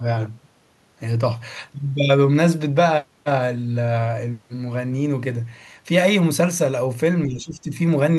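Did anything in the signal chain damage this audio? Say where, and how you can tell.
Yes, at the call-processing stage. From 7.26 to 7.74 s the speech dips by about 10 dB for roughly half a second. This is speech suppressed in double talk, likely the echo canceller confusing the near-end talker with the echo of overlapping far-end audio and attenuating the near-end talker.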